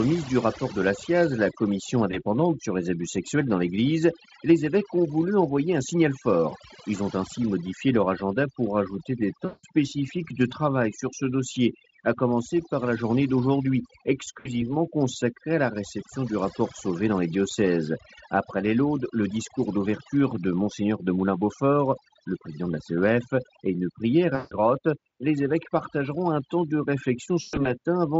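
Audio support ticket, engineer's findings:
Overdone noise removal, whole clip. Suppressor set too strong: frequency bands near its noise estimate pushed far down or gated off, taking quiet parts of the speech with them. Result: background drops out and breaks into twinkling, warbling specks. Present from start to end.

VoIP packet loss concealed by the speech codec, five spots. Lost packets; decoder extrapolates from last pitch and filter, gain stepping down per frame. Sound smeared into a fading buzzy tone or coloured noise, speech weak or distorted after packets resume.
2.11 s: 20 ms gap.
9.45 s, after "agenda pour ajouter des": 180 ms.
14.39 s, after "par la journée d'aujourd'hui", before "consacrée à la réception": 60 ms.
24.35 s, after "et une prière": 160 ms.
27.41 s: 160 ms scattered over 240 ms, longest run 120 ms.

Speex path itself clean, no more than faint coding damage, consistent with a high-rate setting near 34 kbps.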